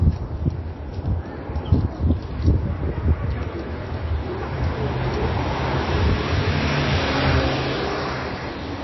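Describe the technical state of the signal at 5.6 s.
MP3 compression is audible at 5.6 s, as it is across the whole clip, and is likely the cause of what is heard. Nothing remains above 5.8 kHz, and the damage is plainly audible: weak frequency lines drop in and out between frames, making the sound watery and swirly with smeared attacks. That points to a very low bitrate, around 24 kbps, where the encoder has too few bits for the treble.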